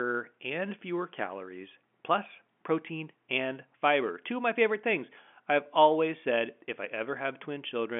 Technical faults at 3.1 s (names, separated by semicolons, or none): none